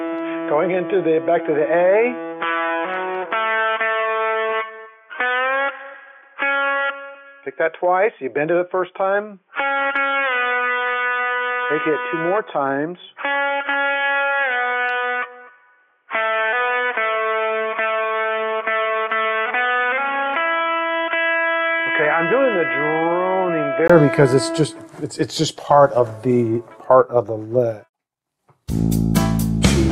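From the start to 23.9 s the sound is dull and boxy, with nothing above 3.5 kHz, a few dB quieter, and a faint noise floor. A 20 ms gap then precedes fuller sound, likely an input switched to a poorer device that then switched back.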